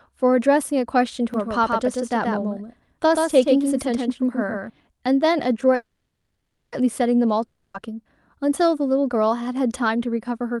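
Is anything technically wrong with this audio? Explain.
Yes, there are three faults.

From 1.34 to 4.70 s there is a doubled audio track: a second full-band copy of the speech trails the original by roughly 150 ms, about 5 dB quieter. This is likely a second capture through a slower path. Unlike a room echo or reverb, the copy has no decay and no room colour, and it begins and ends abruptly rather than fading.

From 5.75 to 6.74 s there is a call audio freeze. The last sound is stretched into a fading buzz that sinks into about 0.6 s of near-silence, filling roughly 0.97 s in total. The likely cause is delayed packets draining the jitter buffer. When the audio resumes, it continues exactly where it stopped. Nothing is lost; everything afterwards simply runs almost a second late. That is what separates it from a dropout.

From 7.46 to 7.76 s there is a long network dropout. A brief fading fill and about 80 ms of silence cover 0.28 s, and the audio returns with that 0.28 s of speech missing, most likely because the packets never arrived. 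Unlike the freeze, the speech jumps forward rather than picking up where it stopped.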